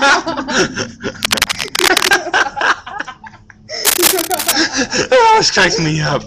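Cable scratch noise appears from 1.22 to 2.14 s and again from 3.85 to 4.52 s. Each time, dense, irregular bursts of crackling and rustling sit over the sound, roughly as loud as the sound itself. The likely cause is a worn cable, connector or control being moved, so that its contact resistance jumps about rapidly and turns those fluctuations into bursts of noise in the signal.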